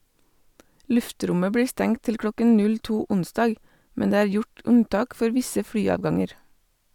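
No technical faults are audible.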